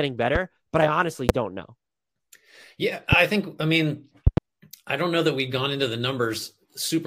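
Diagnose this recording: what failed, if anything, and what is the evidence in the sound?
Sharp loud pops, about 15 to 20 dB above the speech, which continues beneath them: 0.35 s before "but I honestly don't", 1.29 s before "don't know", 3.12 s before "think I mean", and a double pop at 4.27–4.40 s. These are voltage pulses added in the analogue wiring, likely from a loose plug, switch or static.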